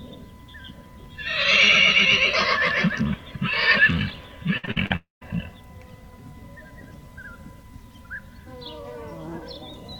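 From 4.57 to 4.92 s the sound turns choppy: repeated packet loss (robotic sound). Four short holes, the longest about 59 ms, are each patched by stretching the previous sound, so nearly half of this span is filled-in rather than real audio, unlike one single break.

From 4.96 to 5.23 s comes a longer hole, likely a network dropout. The last sound is held as a fading buzz, then about 160 ms of silence follows before audio resumes with that stretch missing, one sustained gap rather than a stuttering series.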